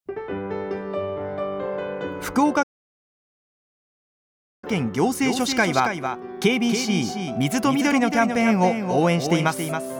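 At 2.62 s the player most likely ran short of buffered data or had its output thread held up, a playback stall, so nothing reached the output until it caught up. The sound breaks off mid-flow and stays silent for about two seconds, from 2.62 s to 4.64 s, then carries on. The gap is dead silence with no fade at either edge, which sets it apart from an ordinary pause.

From 5.22 s to the end, the audio is likely being mixed in twice, through a second, slower capture path or two misaligned copies in an edit. This is a doubled audio track. A full-band duplicate trails the original by roughly 300 ms at about 5 dB lower, so every sound has a distinct, dry repeat with no room tail or decay. The copy switches on abruptly at 5.22 s rather than building up, and it continues to the end of the clip.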